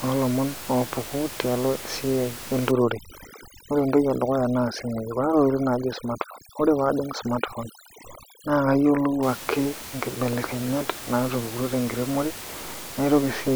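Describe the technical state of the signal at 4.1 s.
At 4.1 s you're in the middle of overdone noise removal, which runs from about 2.71 s to 9.23 s and lets go just before "ake nkibelekenyat naatupukutuo tenkiremore". The denoiser is set far too hard for room noise sitting only about 13 dB under the speech, so it keeps switching off individual frequency bands that land near its noise estimate, taking quiet bits of speech with them. The gaps go almost dead with twinkly specks.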